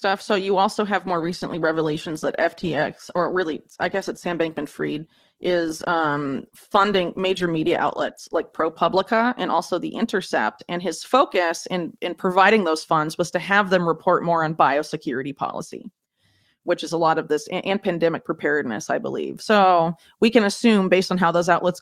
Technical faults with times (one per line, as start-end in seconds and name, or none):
1.06-9.06 adaptive stream at a lower bitrate